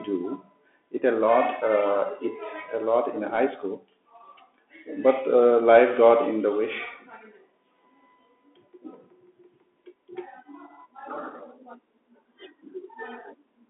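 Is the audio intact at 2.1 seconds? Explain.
No. At 2.1 seconds, as across the whole clip, the speech sounds thin and muffled, with scratchy s sounds and a granular hiss beneath it. Nothing passes above about 3.8 kHz, and the band sits roughly between 250 Hz and 3.5 kHz. This is the Bluetooth CVSD headset codec, which fits a 64 kbps stream that sends a single up-or-down bit per sample with an adapting step size.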